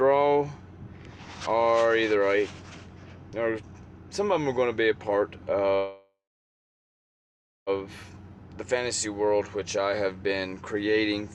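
From 5.75 to 7.70 s the sound halts, trailing into a fading buzz or hiss and then 1.52 s of silence, before resuming exactly where it stopped. This call audio freeze likely came from delayed packets emptying the jitter buffer, inserting a 1.91 s gap without losing anything.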